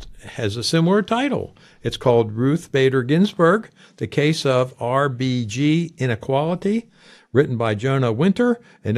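No technical faults can be heard anywhere in this recording.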